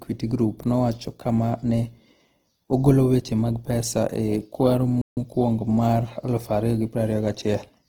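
Throughout the speech, the encoder is likely running short of bits in Opus compression's music mode, filling starved bands with folded or noise-like energy. Bandwidth stays full, but the voice sounds plainly grainy and rough, consistent with roughly 16 kbps.

At 5.01 s the player likely runs out of data or is blocked, causing a playback stall: output drops to silence for 154 ms, until 5.17 s, cutting the speech off mid-flow before it resumes.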